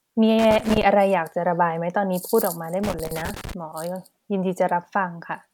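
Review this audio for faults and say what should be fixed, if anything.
There are two bursts of loose connector crackle in this speech, from 0.39 to 0.83 s and again from 2.83 to 3.53 s. Each one is a ragged, irregular scratching where a worn or dirty contact in the cable path keeps making and breaking as it shifts. That chops the signal in and out, and any DC on the line turns each break into a pop. To prevent it, clean or replace that connector and strain-relieve the cable.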